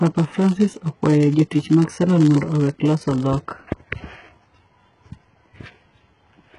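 Throughout the speech, a filter restarted on every block produces a buzz at about 86.1 Hz that rises and falls with the level of the speech. The filter loses its state at each block boundary and begins again from silence. The repeat rate fits a 512-sample buffer. On a waveform this shows as small transients every 11.6 ms, and on a spectrogram as evenly spaced thin vertical stripes.

The whole clip also carries heavy codec damage, likely from HE-AAC compression at a very low bitrate, roughly 12 kbps. The treble is rebuilt from copies of lower bands, so it sounds gritty and metallic, and s sounds lisp. On a spectrogram, nothing appears above 11 kHz, and the upper band shows smeared, repeated patterns.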